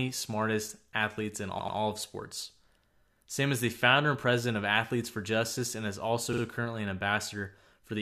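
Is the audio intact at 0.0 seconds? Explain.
Yes, the speech at 0.0 s is intact, with no audible fault at that moment.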